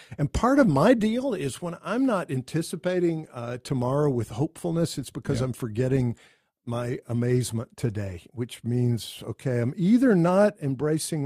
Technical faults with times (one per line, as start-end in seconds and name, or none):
none